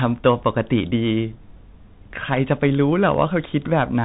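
Throughout the speech, the Bluetooth CVSD headset codec cuts everything above 3.8 kHz. Its one-bit delta steps lag loud sounds, roughening s sounds and leaving granular hiss.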